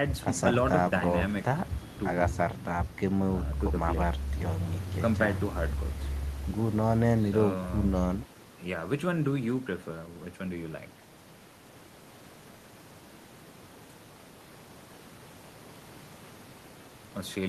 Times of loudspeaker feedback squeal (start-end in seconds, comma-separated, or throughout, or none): none